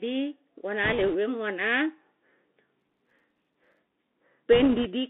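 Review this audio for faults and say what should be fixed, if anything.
The whole clip carries the Bluetooth CVSD headset codec. The speech sits in a narrow telephone-like band, roughly 250 Hz to 3.6 kHz, which fits a 64 kbit/s CVSD link. Its one-bit delta coding can't keep up with loud, fast high-frequency movement, so sibilants turn scratchy and a fine granular hiss lies under everything. On a spectrogram, energy stops sharply near 3.6 kHz with a noise floor filling the gaps between syllables. The fix is to use a wideband (mSBC) or LE Audio connection instead of the narrowband headset profile.

Bit errors on a Bluetooth voice link occur from 0.84 to 1.16 s, ending just before "wemu ana", and again from 4.52 to 4.86 s. At an error rate around 2 percent, flipped bits knock the CVSD decoder's step tracking off course, which adds a rushing, crackly noise over the speech with no sharp clicks. 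A waveform shows fuzzy, ragged noise riding on the signal. A spectrogram shows a broadband haze across the coded band for those spans. Better radio conditions, such as shorter range, less interference or retransmission-capable links, would prevent it.

Processor overload crackle runs from 2.80 to 3.80 s. Over that second the system misses many deadlines on sub-millisecond buffers, and each missed buffer is output as silence. The result is a dense train of tiny hard-edged dropouts that sounds like gritty tearing laid over the speech. In the waveform it appears as many brief notches. The spectrogram shows rapid vertical broadband streaks throughout that second. Larger buffers or a lighter processing load would prevent it.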